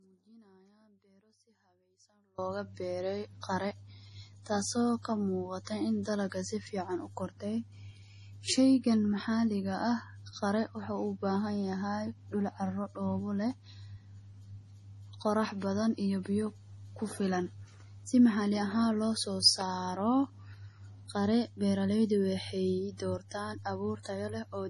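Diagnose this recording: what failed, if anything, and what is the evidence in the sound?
The whole clip is band-limited, with nothing above 11.4 kHz and heavy codec damage throughout. The likely cause is MP3 compression at the codec stage, at a low bitrate that fits about 32 kbps. Unlike a plain low-pass filter, the damage comes from bit starvation: weak frequency lines are zeroed frame by frame, not just the treble removed.

From the start to 2.38 s, the wanted speech is missing and only a faint residue remains, about 35 dB below the normal level, before the signal returns abruptly. This is likely an audio dropout to a faint residue: a break upstream while the path after it stayed live. The switch is sudden, which separates it from a pause or a fade.

Pre-echo, a codec-stage fault, appears at 3.41 s (spread over 20 ms), 5.64 s (27 ms) and 24.03 s (23 ms). Quantisation noise sized for a sharp attack fills the quiet moment just before it, leaving a short hiss ahead of the onset. 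A dropout leaves a gap, while pre-echo adds noise before a sound.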